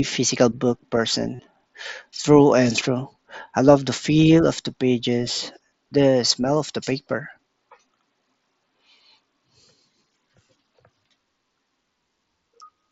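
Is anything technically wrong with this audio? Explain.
Yes, there's a short concealed Bluetooth headset packet loss at 1.35 to 1.40 s, right after "physical book." Around 40 ms of headset packets went missing, which fits about five lost packets. The phone filled the hole by looping the best-matching piece of the last couple of tens of milliseconds, so you get a brief buzzy, held tone and a slight warble as the real signal resumes, all within the 8 kHz wideband range of the mSBC link.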